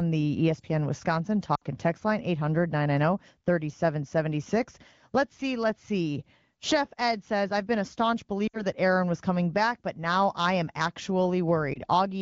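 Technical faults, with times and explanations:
1.55–1.63 s, 8.48–8.63 s and 11.74 s, lost AMR speech frames: radio errors corrupted frames on the wideband call, so the decoder discarded them and stood in with the last good pitch and vocal tract settings at falling gain. The first two gaps, each about 60 ms and consistent with three lost frames, smear the sound and dip it toward silence. The last, a single 20 ms frame, is a brief warble. Each time the sound returns weak or rough for a moment.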